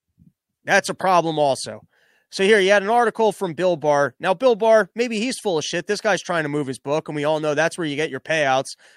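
Two unsynchronised clocks, likely drifting apart by around 20 ppm, cause clock slip clicks from 0.63 to 8.91 s: faint ticks about once a second.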